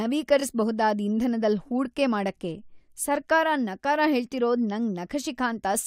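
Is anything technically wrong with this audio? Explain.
Yes. Repeated frames at 0.39–0.41 s: a 21.3 ms block, which fits one compressed frame, plays twice, causing a brief stutter. The waveform shows a duplicated segment.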